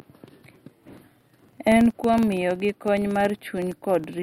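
From start to finish, the speech carries a low, rough buzz near 21.5 Hz. It comes from a filter restarted on every block. The filter discards its memory at each block boundary and begins again from silence. Each restart leaves a tiny transient, so the ticks repeat about 21.5 times per second. That rate fits a 2048-sample block. The buzz rises and falls with the speech level, strongest on louder passages.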